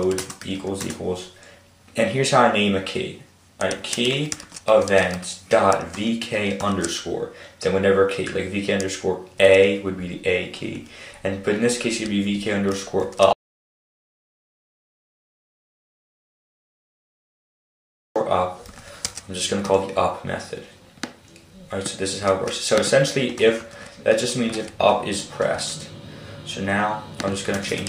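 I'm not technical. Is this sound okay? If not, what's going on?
No, not quite. At 13.33 seconds the sound cuts out completely and only comes back at 18.16, so nearly five seconds are simply gone. That's an audio dropout to silence: the gap is dead quiet, without even the faint background hiss you'd normally hear. The likely cause is the input getting lost for a moment, say a loose cable or an accidental mute, while the recording kept running. Whatever happened in those seconds can't be recovered.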